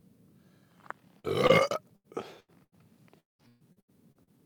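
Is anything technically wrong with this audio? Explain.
Yes, there are packet-loss faults of four kinds.

Short concealed packet loss occurs at 1.19–1.26 s (about 40 ms missing) and 1.47–1.52 s (about 20 ms). The receiver extended the preceding sound and blended back in, leaving a brief smear or wobble. Unlike a burst, the patch is too short to fade audibly.

A lost packet rebuilt from error correction sits at 1.49–1.51 s, covering 20 ms. The following packet carried a low-bitrate copy, so nothing drops out. That frame just turns rougher and noisier, which separates it from concealment, where the sound is guessed rather than decoded.

A burst of packet loss occurs three times, at 1.96–2.07 s, 2.40–2.51 s and 2.64–2.75 s, each removing about 80 ms. Consecutive packets were lost, so the concealment holds the last sound as a buzz or hiss that fades. The audio then resumes further on with material gone. 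This is longer than the short losses.

Repeated packet loss (robotic sound) runs from 3.20 to 4.38 s. Six gaps follow one another closely, the longest 190 ms, and about 520 ms is missing in total. Concealment fills roughly 45% of that stretch, giving choppy sound with pieces missing. Unlike the isolated bursts, the holes come one after another with little clean audio between them.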